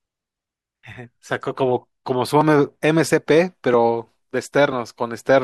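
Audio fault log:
2.75 to 5.21 s, periodic USB or driver dropouts: the speech ticks every 0.49 s, about seven times, as the stalled driver skips roughly 10 ms each time.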